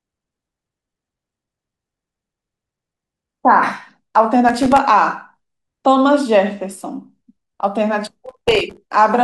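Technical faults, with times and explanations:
4.49–4.78 s and 8.26–8.78 s, processor overload crackle: the audio breaks into gritty crackle as the processor misses buffer deadlines in quick succession. Each missed buffer, apparently only around 1.5 ms long, leaves a hard-edged gap of silence. The second, longer burst has many more dropouts packed together.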